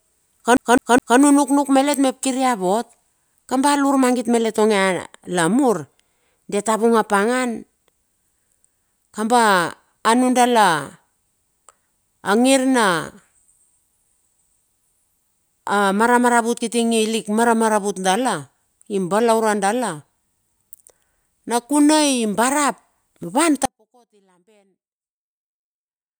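At 0.57 s the speech locks into a CD stuck on one turn: a 208 ms fragment repeats three times with brief mutes, skipping until 1.19 s. At 23.65 s an audio dropout to a faint residue begins. The speech cuts abruptly to a faint leak, roughly 35 dB down, lasting to the end. The likely cause is a lost feed.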